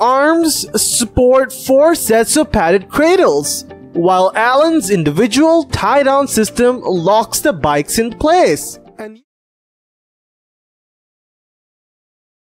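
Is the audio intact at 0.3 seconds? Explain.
Yes, the audio at 0.3 s is intact, with no fault audible at that moment.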